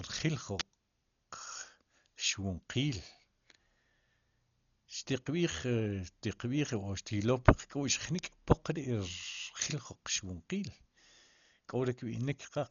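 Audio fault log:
throughout, Dolby Digital compression. The speech sounds dull and boxed in. Nothing is present above 6.9 kHz, so the top of the band is simply gone. Around voiced tones there is a rough, fluttering grain. The encoder has likely run at a very low rate, around 40 kbps. It then keeps only coarse spectral detail, and many frequency lines get no real data. The decoder fills those gaps with noise, which causes the flutter. The damage is heavy.
0.60 s and 8.19 s, electrical switching spike. Each is a sharp snap laid over the speech. Both are very brief, about 13 milliseconds and 1 millisecond. They sound added on top, not part of the speech itself. This points to a nearby switch, motor or static discharge. A short arc from one of these was likely picked up by the audio line as a sudden jolt of voltage, which the recording captured as a click.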